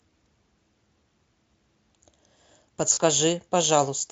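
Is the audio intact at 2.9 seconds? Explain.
No. From 2.93 to 2.98 s the speech breaks up with VoIP packet loss concealed by the speech codec. About 40 ms of audio goes missing, which fits two lost 20 ms frames. The decoder fills the gap by extending its last pitch and spectral envelope at falling gain, so the sound smears into a short buzzy tone or coloured noise that fades. Because each frame builds on the last, the speech stays weak or distorted for a moment after the stream resumes.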